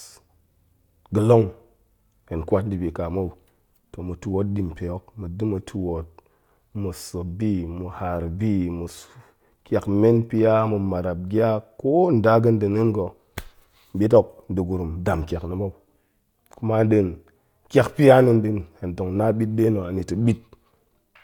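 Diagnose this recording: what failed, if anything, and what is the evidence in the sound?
Nothing in the signal chain has failed: the speech arrives as a continuous, stable signal with no breaks, level anomalies or other technical faults anywhere along the recording.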